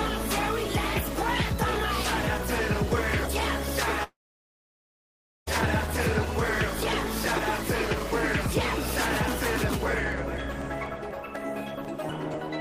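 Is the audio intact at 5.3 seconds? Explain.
No. A long network dropout runs from 4.03 to 5.49 s. Audio likely stopped arriving: a brief fading buzz, then silence, showing as a flat waveform and a blank spectrogram band at 5.3 s.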